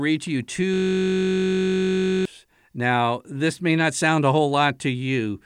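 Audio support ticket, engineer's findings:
System hang loop, 0.74–2.25 s, just after "to you". Host or audio driver stalled while the interface kept replaying its ring buffer. One 21.33 ms slice repeats some seventy times, which fits a 1024-sample buffer. Heard as a steady buzz at 46.9 Hz replacing the speech until the system recovers.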